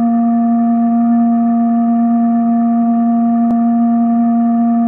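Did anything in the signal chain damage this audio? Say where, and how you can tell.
Yes. At 3.51 s the music has a brief glitch from damaged data in a compressed stream, a codec-stage fault. Bytes in the encoded file were corrupted there. The decoder misread those frames, lost sync, and had to hunt for the next valid frame header.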